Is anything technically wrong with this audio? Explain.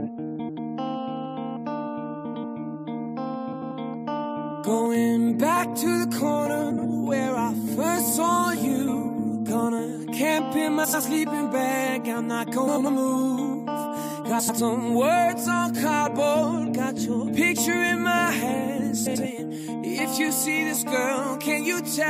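Yes. Frames out of order at 0.39, 2.25, 3.52, 6.70, 10.84, 12.67, 14.39 and 19.06 s, each about 0.2 s long (0.15 s at 6.70 s): two adjacent blocks of about 93 ms (70 ms at 6.70 s) are played swapped, giving a garbled flutter. Waveform and spectrogram show abrupt discontinuities, with no gap.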